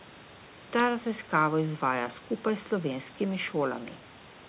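Nothing stood out on listening to this speech clip; the faint room noise sits about 24 dB below the speech, and the call path's band limit leaves nothing above 4 kHz.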